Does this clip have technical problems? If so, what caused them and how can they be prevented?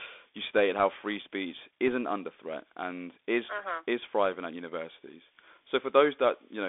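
Yes. The Bluetooth CVSD headset codec runs throughout: the speech is confined to roughly 300 Hz to 3.5 kHz, with scratchy sibilants and granular hiss, which fits a 64 kbit/s CVSD stream. Prevent it with a wideband headset profile such as mSBC or a wired microphone.

Bit errors on the Bluetooth voice link appear from 1.88 to 1.94 s, between "stated how free speech" and "under threat and is". They cause a brief rushing crackle without loud clicks, consistent with an error rate around half a percent. Prevent them by reducing distance and radio interference between headset and host.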